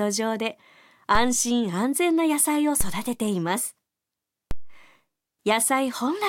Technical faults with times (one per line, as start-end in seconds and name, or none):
1.15 DC step
2.81 DC step
4.51 DC step